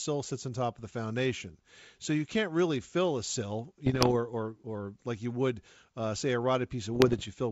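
From 3.86 to 4.12 s, and again from 6.95 to 7.27 s, bit errors on an ADPCM link break into the speech. Around one percent of bits are flipped. Each error knocks the decoder's step size and predictor off track. The result is pops, rough bursts and brief level jumps. The wideband G.722 coding is intact around them, with faint upper-band hiss.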